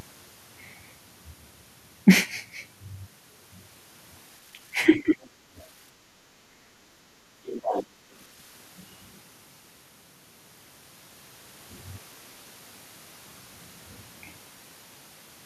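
Throughout the recording the waveform sits on a constant DC offset, shifted away from the zero line. It cannot be heard as such. It shows as a steady component at the very bottom of the spectrum and uses up headroom on one side of the waveform.

From 4.74 to 5.21 s the talker's speech is pulled down in a way that fits speech suppressed in double talk. The level falls by roughly 25 dB at its deepest, over about a third of a second in total within that span. The likely cause is the echo canceller failing to tell the near talker from loudspeaker echo while both sides were active, and attenuating everything.

At 5.49 to 5.55 s the background is gated by the echo canceller. The room sound dips by about 9 dB for a very short moment, then returns as the canceller releases. A second gate from 7.87 to 8.11 s is shallower, about 6 dB, and lasts a fraction of a second, heard as a brief dip in the ambience.

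At 6.5 to 6.56 s a second, shorter case of likely speech suppressed in double talk cuts the voice by roughly 20 dB, a quick clipped-off moment.

The other side's voice leaks through twice. From 5.58 to 5.62 s it is only a faint scrap, far below the talker. From 7.46 to 7.86 s it is much stronger, only some 15 dB under the speech. The likely cause is loudspeaker playback that the echo canceller did not fully remove from the microphone signal.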